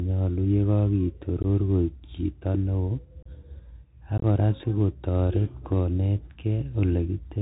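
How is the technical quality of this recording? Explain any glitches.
The technical quality is poor. The whole recording is narrowband and gritty, and three brief dropouts break up the speech.

The Bluetooth CVSD headset codec is present throughout, at a level that is plainly audible, which fits a 64 kbit/s CVSD link. It sends one up-or-down bit per sample with an adapting step. Nothing above 4 kHz survives, a granular hiss sits underneath, and s sounds turn scratchy. That grainy hiss and slope overload set it apart from a clean telephone band-limit.

Unconcealed Bluetooth headset packet loss occurs three times. At 1.43–1.45 s, a couple of packets (15 ms) vanish. At 3.23–3.28 s, a few more (30 ms) go. At 4.18–4.25 s, several losses totalling 45 ms scatter over 60 ms, the longest run 22.5 ms. Each gap is replaced by silence or an idle pattern, with hard-edged holes, and the speech returns briefly quieter. 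No repeated or smoothed audio fills the gaps, which separates this from concealed loss.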